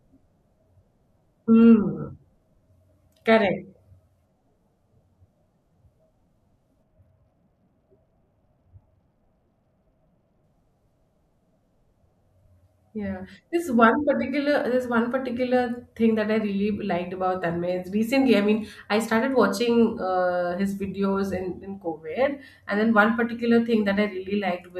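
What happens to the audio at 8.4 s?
At 8.4 s the speech is in the middle of a Bluetooth SBC bit pool drop that runs from about 6.83 to 10.44 s. The link seems to have been congested, so the encoder cut its bit budget sharply. The sound fits a fall from a bit pool near 28 to one near 12, roughly 96 kbps. The highest sub-bands get almost no bits, so the treble goes dull. The remaining bands are coarsely quantised, which adds a gritty noise until the rate recovers.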